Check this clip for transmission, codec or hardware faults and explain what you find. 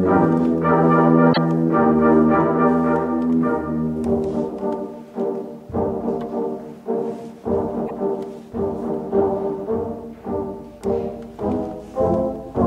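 Two brief faults, at 1.32 to 1.38 s and 7.85 to 7.91 s, point to a likely broken MP3 bit reservoir. Frames went missing, so the following frames reached back for borrowed data and decoded another frame's bytes instead. Each time the sound skips ahead with a glitch of about 0.06 s, roughly two 26.1 ms frames.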